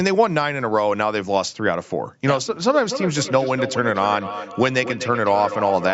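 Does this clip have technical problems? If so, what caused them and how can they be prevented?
Yes. From 2.7 s to the end, feedback echo between two devices returns the speech roughly every 300 ms, thinner and ringing, peaking about 9 dB below the direct sound, because one device's microphone re-captures the other's playback. Muting or headphoning one device prevents it.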